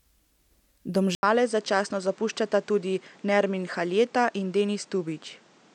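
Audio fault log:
1.15–5.75 s, input switched to a poorer device: after an 80 ms gap, speech loses everything above 9 kHz, drops about 5 dB, and gains fresh background noise; likely a different microphone.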